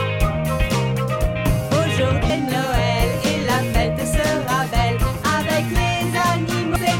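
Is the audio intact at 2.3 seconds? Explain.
No. Right at 2.30 s there's a spot of damaged data in the compressed stream. A chunk of the encoded bytes there is wrong, so the decoder can't make sense of those frames. It drops out of sync and has to hunt for the next valid frame header before it can carry on. What you get is a brief chirp or blip cutting into the sound at that instant.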